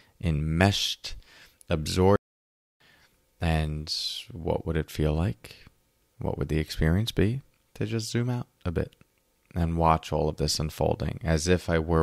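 At 2.16 s the speech cuts out abruptly and stays silent until 2.80 s, a gap of about 0.64 s. This is a playback stall, likely from the player running short of data or its thread being blocked. Sound then resumes after the gap.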